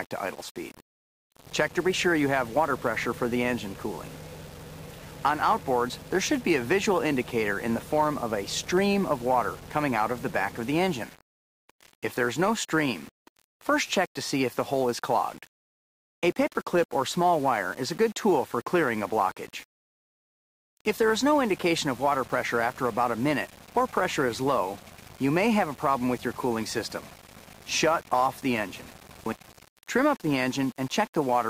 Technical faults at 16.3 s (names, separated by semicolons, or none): low bit depth without dither